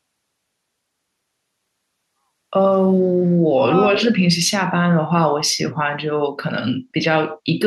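At 3.32 to 3.37 s the echo canceller clamped the microphone while the loudspeaker was active, causing background gating by the echo canceller: for about 50 ms the room sound falls by about 19 dB, a brief hole in the ambience before it returns.

From 3.65 to 3.72 s, and again from 4.06 to 4.27 s, the canceller likely misread overlapping talk as echo and attenuated everything, causing speech suppressed in double talk. The voice drops by roughly 30 dB, for about 70 ms and then about 200 ms.

Between 3.95 and 4.05 s the canceller likely failed to remove all the loudspeaker pickup, and that residue was sent back as an echo leak: a faint copy of the voice arrives 331 ms late, about 10 dB below the speech, as a short ghostly scrap.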